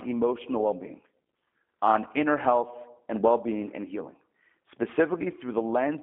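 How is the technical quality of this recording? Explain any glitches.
The speech comes through, but it's plainly been squeezed through a G.729 codec the whole way. The sound is confined to a narrow band of about 200 Hz to 3.5 kHz, so it's thin and boxy with no top end. The codec doesn't send the waveform. It rebuilds each 10 ms frame from a vocal-tract filter, a pitch predictor and a few pulses, which fits an 8 kbit/s stream. That rebuilding gives the voice its slightly rough, synthetic edge.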